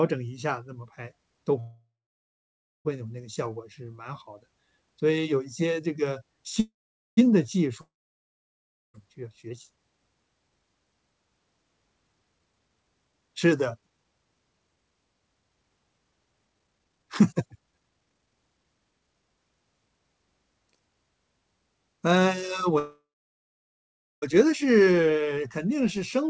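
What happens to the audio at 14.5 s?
The speech sounds hurried but keeps its normal pitch, running at 125% speed from 12.32 to 19.37 s. This is a jitter buffer speed-up: after a backlog built up, the receiver repeatedly cut out pitch-period-sized pieces, trimming about two seconds of delay.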